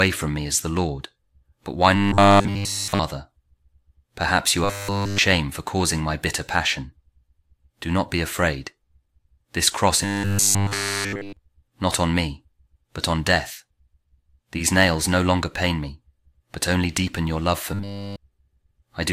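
Audio likely arrived too seldom, so 10 ms buffers were repeated outright, causing robotic sound from repeated short buffers, a rigid 100 Hz buzz, at 1.96–3.00, 4.64–5.18, 10.05–11.37 and 17.74–18.16 s.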